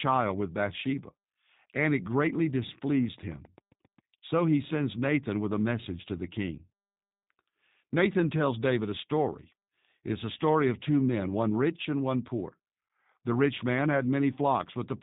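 Throughout, G.729 codec damage is plainly audible: no content above 4 kHz and a rough, synthetic texture from low-rate model resynthesis, fitting 8 kbit/s G.729A.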